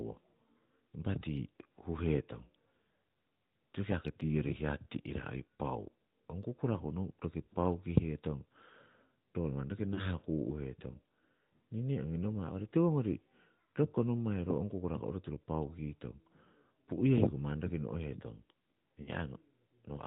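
AMR narrowband mobile codec, throughout: the speech is band-limited to nothing above 4 kHz and carries a plainly audible buzzy, synthetic edge from the vocal-tract model rebuilding each frame from sparse pulses, which fits a mid-rate mode around 10.2 kbps.

Lost AMR speech frames, at 9.94 to 10.03 s and 19.02 to 19.10 s: each gap of about 40 ms, consistent with two consecutive 20 ms frames failing, was filled by repeating the last good pitch and filter settings at falling gain. This produces a brief smeared dip before the speech returns rough for a moment.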